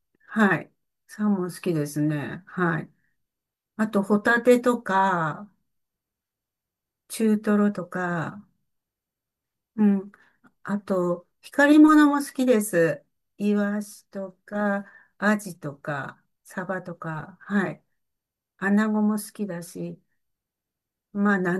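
No technical faults can be heard anywhere in the recording; the signal holds steady and intact throughout.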